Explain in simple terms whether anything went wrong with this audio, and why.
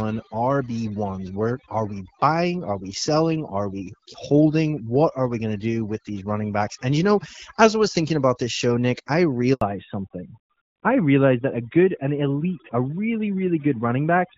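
Overdone noise removal runs through the whole recording. A cleaning tool set too aggressively shut off frequency bands that resembled background noise, taking quiet parts of the speech with them. The background drops and breaks up into twinkling specks.

A handover gap appears from 9.53 to 9.61 s, a break of 80 ms. The call was switching between networks, and no speech reached the listener during the changeover. The voice drops out almost instantly, and whatever was said in that moment is lost.

Fallback to narrowband begins at 9.61 s and lasts to the end. Up to that point the call sounds like HD Voice. Afterwards everything above 4 kHz is gone, which fits a switch to an older phone codec, so the voice sounds duller and rougher.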